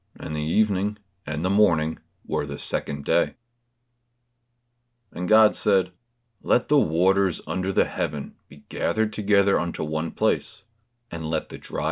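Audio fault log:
No faults were heard anywhere in this speech.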